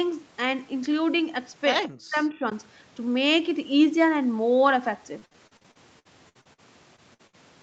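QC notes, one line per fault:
1.88 to 2.45 s, speech suppressed in double talk: the level falls away in pieces, at its deepest by around 40 dB, for roughly four tenths of a second in total. The likely cause is an echo canceller that, with both ends talking at once, treated the near talker as loudspeaker echo and attenuated it. Unlike packet loss, nothing is smeared or held. The audio is simply turned down, and it comes back up once the overlap ends.
5.19 to 6.60 s, repeated packet loss (robotic sound): eleven separate gaps follow one another closely, the longest 59 ms, and about 30 percent of this span is concealment rather than received audio. Each gap is patched by extending the previous sound before the next one arrives, so the passage turns choppy, with pieces missing. The repetition across more than a second is what distinguishes it from a single short gap or burst.
6.96 to 7.00 s, short concealed packet loss: about 20 ms never arrived and was filled by continuing the last sound, then blended back into the real audio. 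It is heard as a brief smear or wobble, and any short consonant at that point can drop out. Being a single isolated hole of a couple of hundredths of a second, it is far shorter than the bursts that follow.
7.14 to 7.21 s and 7.27 to 7.35 s, burst of packet loss: two separate losses of about 60 ms each, with the concealment fading as the gap goes on. Voiced sound becomes a held buzz and unvoiced sound a decaying hiss, after which the audio resumes further along with the section in between missing. These are longer than the single concealed gap just before them and do not repeat in a steady run like the robotic stretch.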